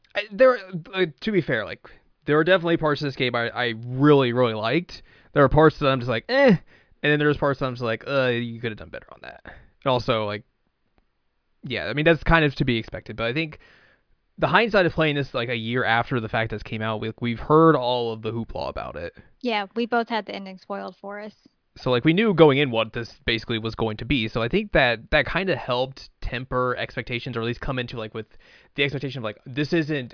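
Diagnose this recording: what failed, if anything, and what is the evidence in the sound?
Nothing in this speech recording points to a failure anywhere in the chain. Careful listening turns up no evidence to trace back to wiring, conversion, processing, transmission, storage or playback.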